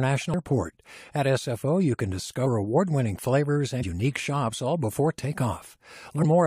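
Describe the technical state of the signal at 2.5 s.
Around 2.45 s, between "you can" and "award winning flavors", compressed frames are skipped: whole frames of the encoded stream were missing or rejected by the decoder as damaged, so playback jumps ahead by about 70 ms of audio. The join is heard as a brief blip. With overlapping lossy frames it is a short smear; with lossless frames it is a hard click. On a waveform, the wave shape changes abruptly at that instant. A spectrogram shows a thin vertical broadband line where the harmonic patterns break off and resume out of step.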